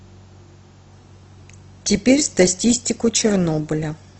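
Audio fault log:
0.93 s to end: adaptive stream at a lower bitrate. The speech suddenly gains codec artefacts with no gap, consistent with Opus stepping down from roughly 64 to 16 kbit/s.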